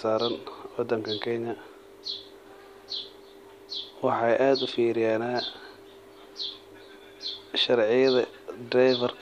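Speech recording with no audible technical faults anywhere in it.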